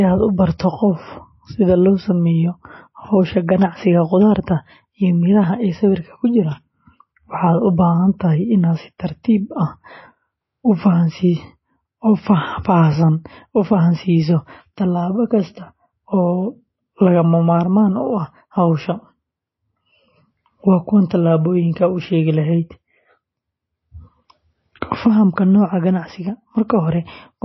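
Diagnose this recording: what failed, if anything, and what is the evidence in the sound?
The codec stage failed: the speech has passed through a lossy encoder, likely MP3 at a very low bitrate, with damage plainly audible throughout. Nothing survives above 5.8 kHz, so sibilants and breath lose their top end. Starved of bits, the encoder discards weak frequency lines, which flicker in and out from frame to frame and leave a watery, swirling texture. The sound points to a rate around 24 kbps.

The same codec stage also causes pre-echo, heard at 3.47 s and 9.23 s. In each case a short hiss of about 14 ms and 12 ms respectively arrives just ahead of a sharp onset. The encoder spreads its quantisation noise across a whole transform block, so noise sized for a loud attack late in the block leaks into the quiet moment before it. As a result, those attacks sound softened and smeared.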